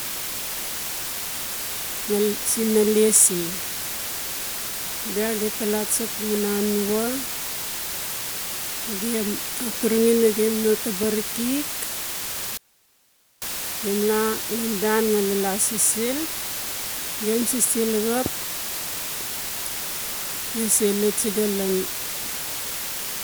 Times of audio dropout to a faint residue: 12.57-13.42

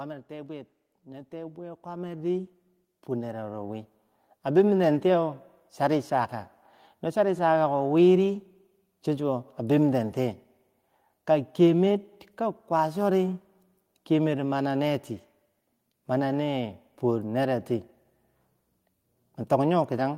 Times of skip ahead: none

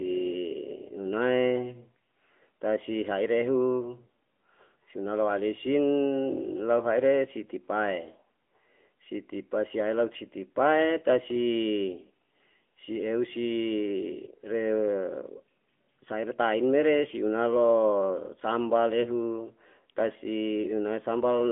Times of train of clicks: none

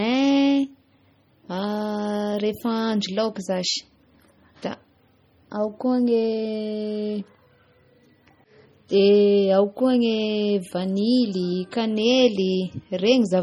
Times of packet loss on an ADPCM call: none

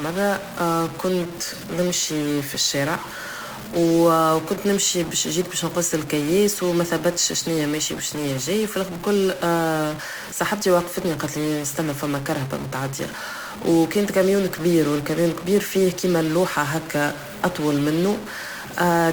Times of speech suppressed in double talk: none

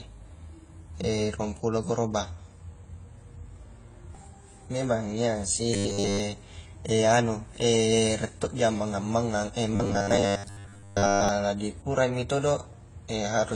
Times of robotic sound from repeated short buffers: 5.74-6.20, 9.76-11.29

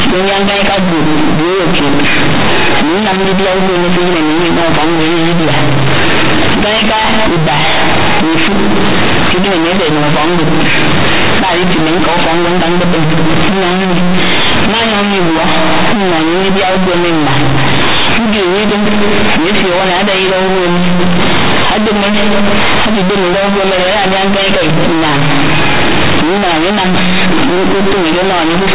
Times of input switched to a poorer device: none

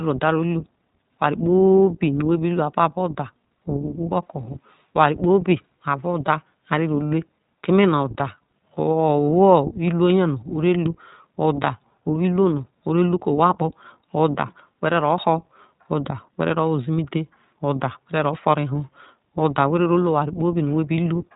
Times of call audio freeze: none

